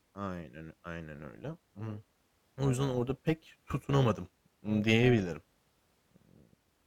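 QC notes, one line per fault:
1.15–6.86 s, overlap-add ripple. The level pulses by about 6 dB, roughly 300 times a second. The speech was split into windowed frames and rejoined with overlaps that don't sum flat. Gain dips once per frame, giving a metallic buzz with extra tones around the voice.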